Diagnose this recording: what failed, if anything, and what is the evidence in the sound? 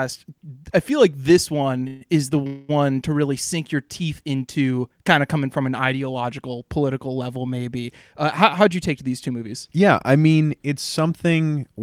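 Two call audio freezes, likely a network stall that drained the jitter buffer, come after "feel like this one" (1.87 to 2.03 s) and after "this one is the" (2.47 to 2.71 s). Each is a fading buzz-like fill of 135 ms and 218 ms, after which speech resumes intact. Unlike a dropout, nothing is lost; the gap is inserted.

A jitter buffer speed-up runs from 8.25 to 9.76 s, after "ideological political level maybe" and before "I mean it's". The receiver trimmed pitch-period slices, about a tenth of a second in total, so speech runs at 106% with unchanged pitch, unlike resampling, which would also shift pitch.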